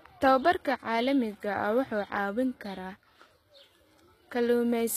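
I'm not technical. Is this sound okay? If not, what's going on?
No. The whole recording has been squeezed hard by a compression format, most likely HE-AAC compression. That format stores only the lower part of the sound properly. It then fakes the treble by copying lower parts upward. So the top end sounds bright but not real. Here the damage is plainly audible. S sounds come out gritty and metallic, almost lispy. Nothing at all remains above about 14.9 kHz.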